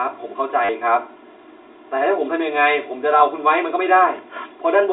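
From the start, the speech carries channel delay (comb filtering): one channel runs about 3 ms behind the other, and summing them to mono cancels shared content at evenly spaced frequencies, first near 150 Hz. It sounds hollow and phasey; a spectrogram shows fixed dark horizontal notch bands throughout.

At 0.65 to 0.69 s, 40 ms of packet loss with the last packet repeated occurs, likely four lost 10 ms packets filled by repeating the last good one. The run gives a brief robotic stutter. The waveform shows a repeating block with small discontinuities. The G.711 telephone band, roughly 250 Hz to 3.7 kHz, frames both faults.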